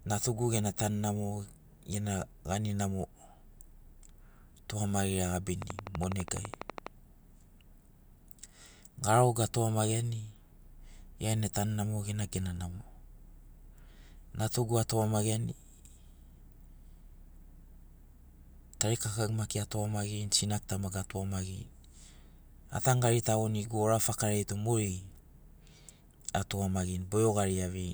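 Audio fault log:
5.62 to 6.88 s, train of clicks: a burst of about fifteen near-identical pulses arrives at a steady 12.1 per second, peaking roughly 10 dB above the speech and ticking straight through it. Unlike random crackle from dust or clipping, the clicks share one shape and keep an even spacing, so they sound like a mechanical ticking over the sound. That regularity points to a likely cause in interference from nearby equipment or a faulty connection or power supply.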